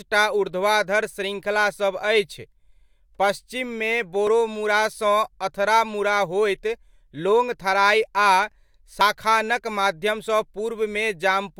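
At 4.27 s the speech makes a small jump, and at 9.01 s it skips further ahead. The likely cause is a dropped buffer (overrun): samples were overwritten before being read, losing roughly 10 ms, then about 40 ms, with no gap.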